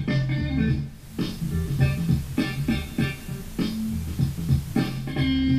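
The audio shows digital radio blending to analogue from 0.81 to 5.26 s: the receiver lost its digital stream and cross-faded over 469 ms to the station's FM signal. Broadband hiss rises to around 25 dB below the programme, and the level shifts by about 1 dB. On a spectrogram, a noise floor fills the gaps across all frequencies, and the waveform shows a slight step in amplitude at each blend.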